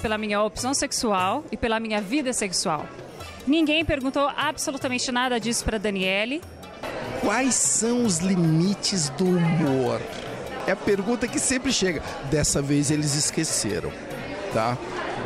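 No technical faults can be heard anywhere in this recording. Nothing breaks into the sound at any point, with no interruption or disturbance to mark.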